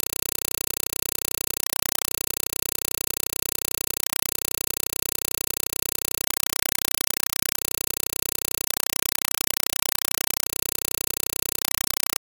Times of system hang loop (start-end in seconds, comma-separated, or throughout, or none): none